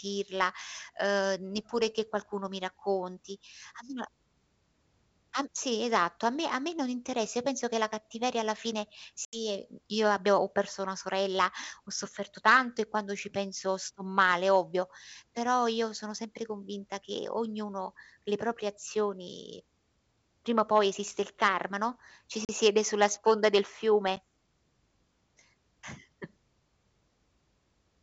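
Speech over a G.722 wideband call, clear up to about 7 kHz with the faint upper-band hiss of the full 64 kbit/s mode, is broken by packet loss on an ADPCM call at 9.25–9.37 s (about 80 ms missing, several packets), 22.45–22.50 s (40 ms) and 24.16–24.19 s (10 ms, roughly one packet). Each gap is a hard-edged silence. Afterwards the decoder's adaptive predictor and step size no longer match the sender's, so the speech resumes with brief slight distortion before settling within tens of milliseconds.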